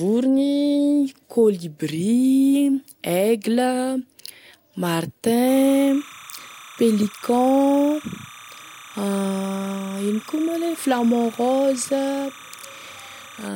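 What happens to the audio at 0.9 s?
Nothing goes wrong at 0.9 s: the speech runs on intact, with no dropout, click or distortion at that point.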